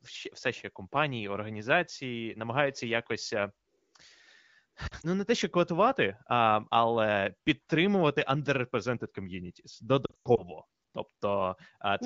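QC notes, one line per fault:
4.87–5.06 s and 10.05–10.45 s, lost AMR speech frames. The decoder repeats the last good settings with falling gain. The first is brief, short warbles over 160 ms. The second has a 100 ms run that drops to near silence and returns rough.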